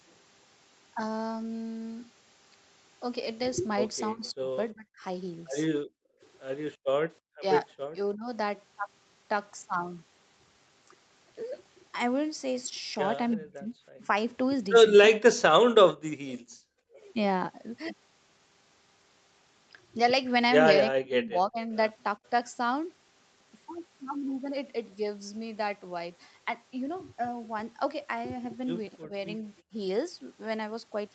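Speech, heard over a call. At 4.13 to 8.28 s, 13.37 to 16.98 s, 20.9 to 21.72 s and 29.02 to 29.73 s the voice dips or breaks up. The deepest dips are about 40 dB, and only about 15 dB in the last one. This is likely speech suppressed in double talk, where the canceller mutes the talker along with the far side. Faint echo leak appears at 13.31 to 13.36 s and 16.29 to 16.33 s. It is a delayed copy 324 ms late and about 30 to 35 dB down, probably residue the echo canceller missed. From 16.01 to 16.67 s the room sound drops by about 27 dB, background gated by the echo canceller while the loudspeaker plays.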